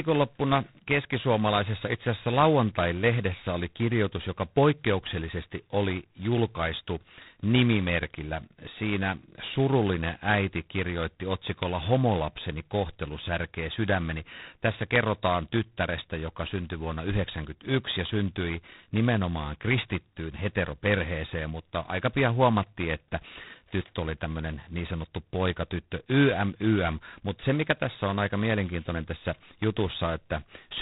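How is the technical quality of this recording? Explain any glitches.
The technical quality is poor. The speech is heavily degraded by G.726 ADPCM coding for its whole length. This codec sends each sample as a small difference from a prediction it keeps adapting. Here very few bits are spent per sample, which fits the 16 kbit/s mode. The coarse steps leave a harsh, rasping hiss that rises and falls with the speech. Nothing above 3.9 kHz survives, so the audio sounds narrow and muffled.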